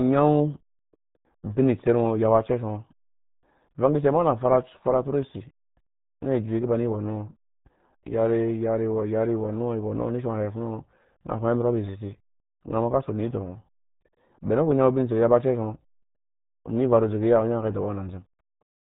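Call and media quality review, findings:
RealAudio 14.4 codec damage, heavy, whole clip. Speech muffled, gargly. Nothing above 3.8 kHz. Sound points to a RealAudio 1 encode at 8 kbit/s, starving the upper band.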